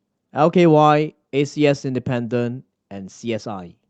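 No faults are audible in this speech; the audio has passed through a call path, and its top end stops around 8 kHz, which fits the call codec's bandwidth setting.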